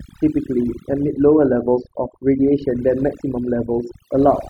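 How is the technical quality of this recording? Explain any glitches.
The technical quality is compromised by overdone noise removal, which runs through the entire speech clip. A noise reduction stage set too aggressively pulls individual frequency bands down or out whenever they sit close to its noise estimate, and the softer parts of the voice get removed along with the noise. The pauses drop to near silence sprinkled with twinkling specks. On a spectrogram the background shows as scattered isolated dots with gaps carved into the speech harmonics.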